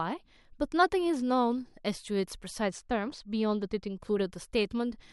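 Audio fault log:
2.62–3.99 s, channel delay (comb filtering): one channel lags the other by a tiny amount, about 0.04 ms, which fits a delay of roughly two samples. When the two are summed to mono, shared content cancels near 10 kHz, dulling the speech's top end.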